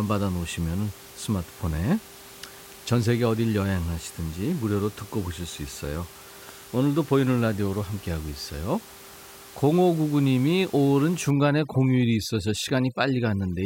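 A speech recording with room noise sitting about 21 dB below the voice shows overdone noise removal from 11.31 to 13.66 s. The suppressor gates bands near its noise estimate, leaving twinkling specks and, on a spectrogram, scattered isolated dots between gaps.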